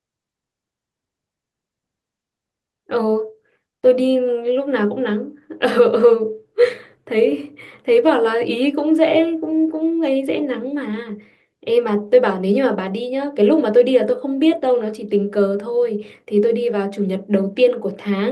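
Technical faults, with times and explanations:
No technical faults can be heard in this speech.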